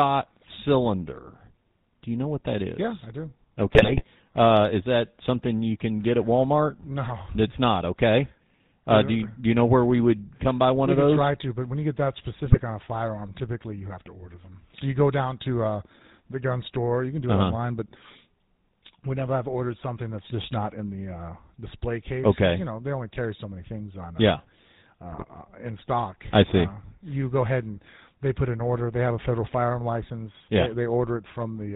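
The whole clip carries the GSM full-rate codec sound, which fits 13 kbps coding: the vocal tract is modelled and driven by a sparse pulse excitation, nothing gets through above 4 kHz, and the speech comes out plainly buzzy and gravelly.

Then there are GSM bit errors, right after "I do" from 3.72 to 4.04 s, again at 12.46 to 12.61 s, and at 25.12 to 25.24 s. Corrupted filter, pitch and gain values warp the decoded frames into brief squawks, pops and gargling.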